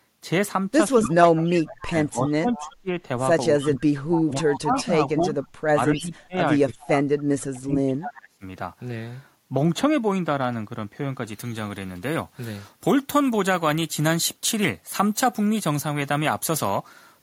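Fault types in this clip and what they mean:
Echo leak: a faint copy of the speech trails 282 ms behind, about 10 to 25 dB down, in scraps; likely a loudspeaker echo canceller letting residual echo through.
Speech suppressed in double talk: speech dips by up to about 30 dB or cuts out in pieces around 1.1–2.9 s and 3.6–8.4 s, likely from echo cancelling during overlap.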